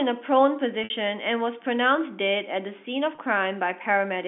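Speech heard through a narrow telephone band, about 200 Hz to 3.5 kHz, with two short buzzy, held-note glitches at 0.84 to 0.90 s and 3.15 to 3.18 s. This is packet loss with pitch repetition: the receiver loops the last pitch period to fill gaps of 60 ms and 30 ms, which fits two lost packets and then one.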